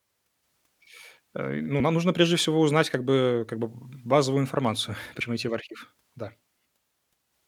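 Damaged data in a compressed stream shows up at 5.2 s in this speech clip as a very short glitch, under 20 ms. Corrupted bytes in one stretch of the compressed data make the decoder misread those frames and lose sync until it locks onto the next valid frame header.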